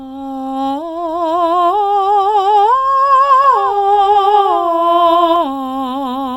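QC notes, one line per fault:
3.44–5.36 s, doubled audio track: likely a second, slower capture path mixed in, so the music repeats around 150 ms late, about 5 dB down, switching in and out abruptly.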